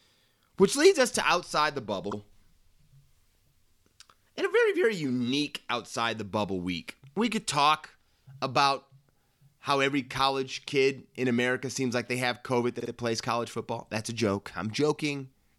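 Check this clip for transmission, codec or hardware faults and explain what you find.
Two repeated-frames stutters show up in this speech. At 2.10 s, right after "us to outside the", a block of about 52 ms plays twice. At 12.79 s, just before "plays college football", the same-sized block plays three times, adding about 105 ms. A short run of compressed frames, likely a couple, got written or sent again, so the decoder replays it. That gives a quick stutter, and the clip runs slightly longer.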